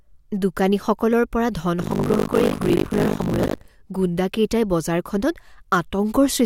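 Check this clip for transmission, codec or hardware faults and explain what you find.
Buffer tearing runs from 1.78 to 3.7 s. The writer and reader of a ring buffer have slipped. Each 20 ms period mixes fresh speech with audio from roughly 70 ms earlier, under half of it stale. Hard joins make a robotic 50 Hz buzz.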